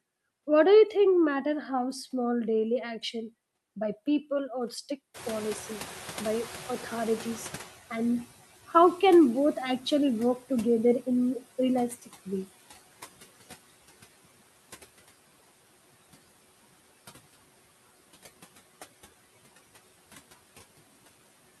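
Across the whole speech clip, noise suppressor artifacts are audible: residual noise is pulled down by about 16 dB between phrases and swells under speech. When the room noise jumps by about 22 dB at roughly 5 s, the noise suppressor is catching up from 5.14 to 8.41 s. Its noise estimate lags, so the louder background comes through with less reduction at first, then sinks by about 15 dB over 3.27 s as it adapts.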